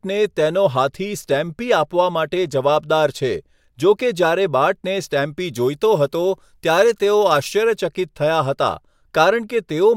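From 5.40 to 7.78 s the speech turns thin and bright. This is pre-emphasis left on. The treble was lifted with a shelf that fits the CD 50/15 µs curve, and the matching de-emphasis was never applied. At 10 kHz the level sits about 8 dB above 1 kHz. Sibilants hiss and sharpen. The lower body of the voice seems to recede.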